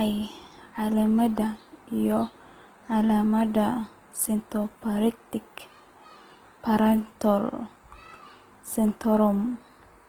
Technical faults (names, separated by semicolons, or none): Opus compression